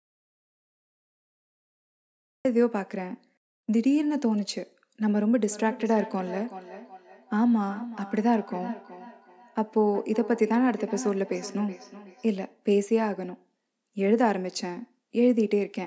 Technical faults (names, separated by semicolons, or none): audio dropout to silence; feedback echo between two devices